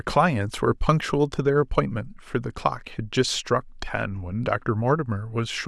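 Nothing goes wrong anywhere in this bit of speech, so there's no technical fault to point to here.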